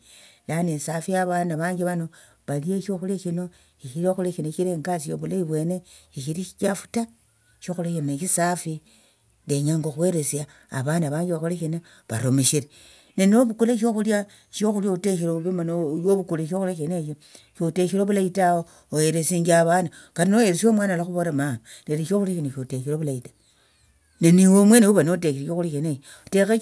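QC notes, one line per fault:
No faults heard.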